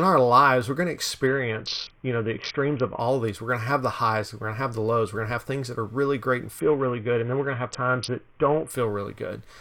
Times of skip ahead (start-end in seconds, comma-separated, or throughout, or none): none